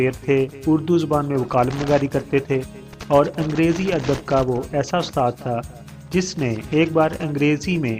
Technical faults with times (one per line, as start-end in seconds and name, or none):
none